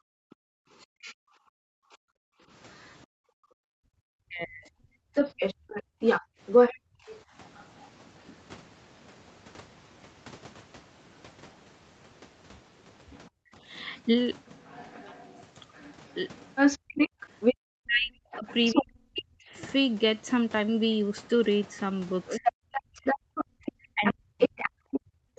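From the start to about 7.07 s, the speech keeps ducking, maybe 40 dB at worst and roughly two seconds in total. That's likely speech suppressed in double talk: the echo canceller couldn't separate the talker from the loudspeaker, so it turned both down. Overlapping that, from 0.3 to 7.85 s, a second voice comes through at about the same level as the talker, likely the other side's voice leaking through because the canceller didn't scrub the loudspeaker signal out of the mic. The room sound also drops out twice, from 1.88 to 2.49 s (about 40 dB down) and from 5.88 to 6.4 s (about 30 dB down), as the canceller clamped the mic hard while the loudspeaker played. That's background gated by the echo canceller. From 13.1 s to the end the leaking voice is back at roughly speech level. At 13.45 to 13.51 s there's a quick dip of about 25 dB, then from 16.9 s to the end the speech is pushed down again, up to about 40 dB, most likely the same double-talk suppression.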